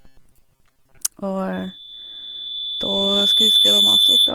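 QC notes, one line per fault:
Throughout: Opus compression, likely at about 24 kbps in its music mode. The band stays full, running up to about 20 kHz. Thin bits get filled with folded or noise energy, so the speech comes out grainy and rough rather than swirly, and the damage is plainly audible.
0.01 to 1.0 s: robotic sound from repeated short buffers. There's a stiff metallic buzz at 133 Hz riding over the speech. That points to a roughly 7.5 ms chunk being replayed while most of the real audio gets dropped, likely from starved buffers.
1.52 s to the end: loudspeaker feedback squeal. A single 3.5 kHz tone creeps up over about two seconds and ends up sitting about 10 dB above the speech. The mic is hearing its own speaker, and at that frequency the loop gain tops one, so the tone keeps feeding itself.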